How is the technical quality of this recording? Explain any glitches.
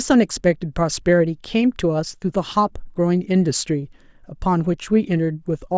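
The technical quality of this recording holds up, with no glitches to explain.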